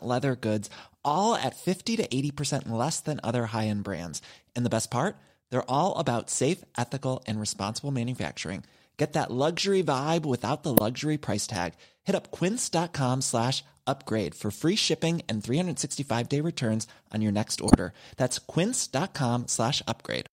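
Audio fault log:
10.77–10.80 s and 17.68–17.75 s, corrupt frame decoded: brief bursts of misplaced spectral energy, after "luxury vibe without the" (before "price tag") and after "returns on your next", where damaged compressed frames were decoded anyway, roughly two frames, then four.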